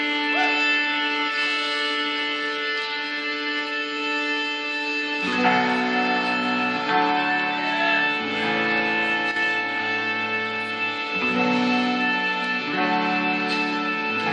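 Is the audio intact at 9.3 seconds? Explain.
No. A brief one channel drop-out runs from 9.31 to 9.36 s, a 50 ms gap in which the sound abruptly falls by about 6 dB and then snaps back to full level. The likely cause is one side of the stereo pair going silent for that instant. Once the two sides are summed to mono, material common to both loses half its contribution, giving that 6 dB dip, and anything carried only on the missing side vanishes for the duration.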